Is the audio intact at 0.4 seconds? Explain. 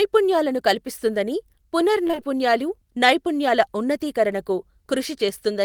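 Yes, the speech is intact at 0.4 seconds, with no fault audible at that moment.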